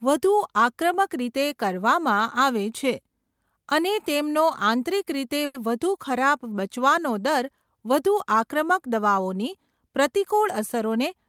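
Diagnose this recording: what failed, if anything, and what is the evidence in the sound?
At 5.45 to 5.56 s one sound is held unnaturally long, a stretched 90 ms sustain with a faint buzz or dip, and then the speech resumes with nothing missing. This is a short stall from a late packet at the network stage: the jitter buffer ran dry, the receiver extended the last sound until the packet arrived, and playback delay grew by 90 ms.

From 10.58 to 11.26 s the speech sounds hurried, running at 107% speed with the pitch unchanged. This is a jitter buffer speed-up in the network playout stage. The buffer was holding extra audio, so the receiver trimmed short pitch-period slices repeatedly, removing about 50 ms in total to bring the delay back down.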